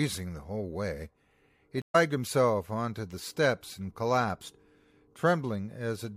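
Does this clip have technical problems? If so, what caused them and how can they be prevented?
Yes. A stream reconnect at 1.82 to 1.96 s: the connection dropped, the player fell silent for 121 ms, then reconnected with a fresh decoder mid-stream, so the speech resumes roughly 150 ms further on, skipping material. A larger network buffer with automatic retry would prevent this.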